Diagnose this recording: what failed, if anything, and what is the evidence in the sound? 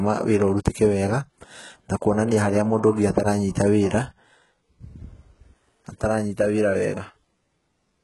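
Codec stage: throughout the speech, the treble sounds synthetic and gritty, with s sounds turning metallic, likely from heavy HE-AAC compression at a rate fitting about 12 kbps. Band replication copies lower bands upward, so a spectrogram shows repeated, misaligned harmonic patterns and nothing above 11.5 kHz.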